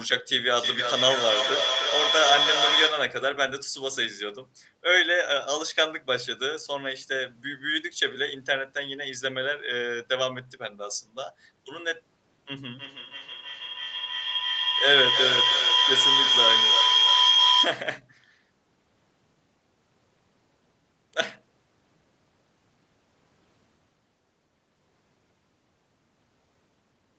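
From 0.54 to 3.21 s there's feedback echo between two devices: each phrase loops back about every 0.3 s, thinning as it repeats, peaking about 1 dB above the speech. Then from 12.78 to 17.98 s the loop turns into a feedback howl, a ringing tone around 3 kHz that climbs to about 4 dB over the speech.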